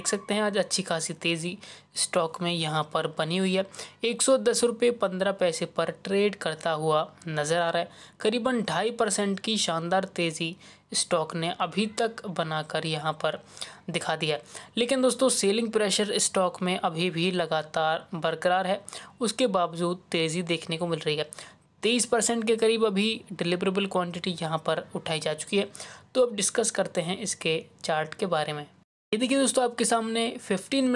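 No faults are audible anywhere in the recording.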